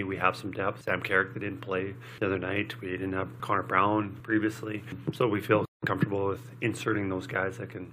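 A short glitch cuts through the audio from 5.86 to 5.88 s, lasting about 20 ms. This is damaged data in a compressed stream. Some of the encoded bytes at that point were corrupted or missing, so the decoder could not interpret those frames correctly. It output garbage or dropped them while it lost sync and scanned forward for the next valid frame header, producing that brief disturbance.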